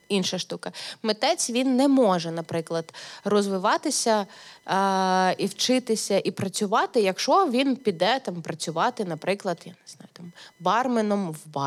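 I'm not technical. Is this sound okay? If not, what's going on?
No, there's a faint buzzy whine running under the speech the whole way through. That's computer activity noise: the machine's processor or graphics working harder nudges the audio circuit's shared ground, causing a chirpy whine pulsing roughly a thousand times a second.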